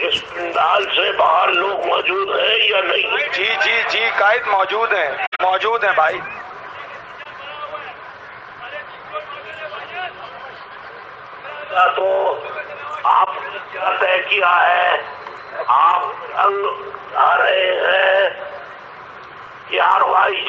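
Three spans mark corrupt frames concealed by the AAC decoder: 5.24 to 5.41 s, fitting roughly seven frames, then 7.23 to 7.26 s and 13.25 to 13.28 s.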